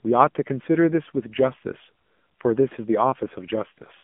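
Speech passed through an AMR narrowband mobile codec for its full length: the band is held to roughly 150 Hz to 3.4 kHz, with nothing above 3.5 kHz, and the plainly buzzy, synthetic texture fits a low AMR-NB mode near 7.4 kbps.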